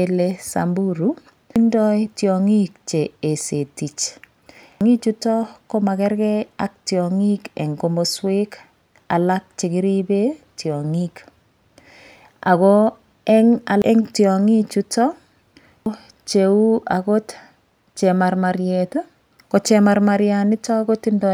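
At 1.56, 4.81, 13.82 (just before "eng' tiong'i chuto") and 15.86 s the speech breaks into a short blip: damaged data in a compressed stream. The decoder hits corrupted bytes, loses frame sync, and glitches briefly while hunting for the next valid header.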